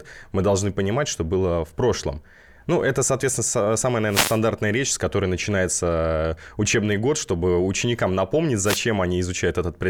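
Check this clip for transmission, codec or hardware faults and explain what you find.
Two wireless microphone noise hits are present in this speech. The first runs from 4.06 to 4.40 s, between "это соответственно самая" and "речь с которой начинается". The second runs from 8.64 to 8.80 s, right after "год чтобы ученикам напомнить". In each, the analogue FM radio link faded as reflected signals cancelled the direct one. The receiver's own noise then rose, heard as a brief swish or burst of static lasting about 0.34 s and 0.16 s respectively.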